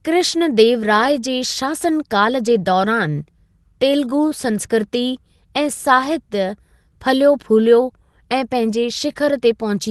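Clock drift between sender and receiver runs through the whole clip. The sender's audio clock runs roughly 1.5 percent slower than the receiver's, so the jitter buffer keeps draining, and the receiver has to stretch what arrives to avoid running dry.

That produces repeated timing corrections from 0.18 s to 9.13 s. The receiver repeats short pieces of the signal again and again, always lengthening and at uneven spacing. Playback runs at 98 percent speed and adds about 150 ms in total. The speech comes through a call codec band-limited to 12 kHz.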